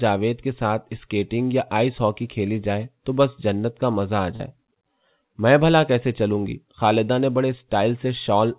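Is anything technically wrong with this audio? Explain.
Yes, there is one fault: a short concealed packet loss from 4.36 to 4.42 s. About 40 ms of the call audio arrived too late to decode, and the receiver filled roughly 34 ms of that gap by extending the preceding sound before crossfading back into the real signal. It comes across as a brief smear or wobble, not a hard gap. That is what sets it apart from a plain dropout, which would leave silence or a sharp click. The band-limited, telephone-like sound, with nothing above 4 kHz, fits the G.711 mu-law call path at 64 kbps.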